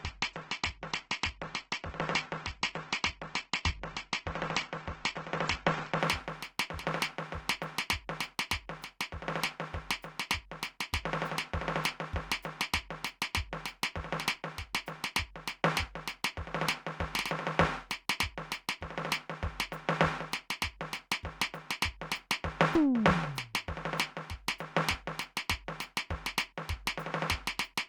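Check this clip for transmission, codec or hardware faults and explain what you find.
One fault is present in this music clip: the adaptive stream starts at a low bitrate. From 0.0 to 6.0 s the player runs a low-bitrate version before measuring the connection, so nothing reaches above 8.2 kHz and codec artefacts are heavy, which points to roughly 12 kbit/s Opus. At 6.0 s it steps up without a gap to a fuller stream, consistent with about 64 kbit/s.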